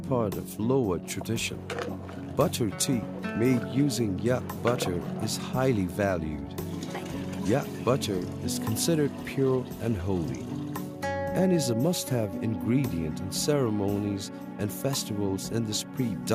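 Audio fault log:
No technical faults can be heard anywhere in the audio, and the signal holds steady from beginning to end.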